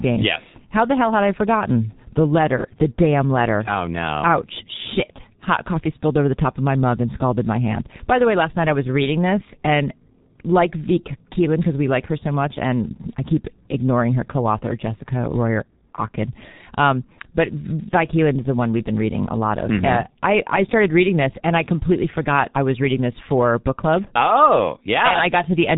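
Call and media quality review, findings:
G.723.1 codec, full clip. Low-rate telephony coding, rate consistent with about 6.3 kbit/s, long frames, slow spectral model. Nothing above 3.8 kHz; speech muffled and hoarse throughout, consonants smeared, heavy codec damage audible start to end.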